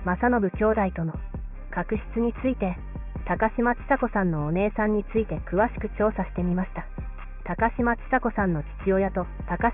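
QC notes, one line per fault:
No faults heard anywhere in the clip.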